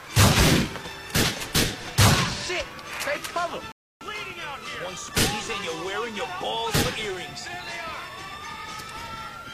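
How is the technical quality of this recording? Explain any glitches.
One glitch affects an otherwise uninterrupted stream. A rebuffering stall runs from 3.72 to 4.01 s: playback ran short of downloaded audio and paused until more data arrived. The sound drops to silence for about 290 ms, then picks up exactly where it stopped, with nothing missing but time added.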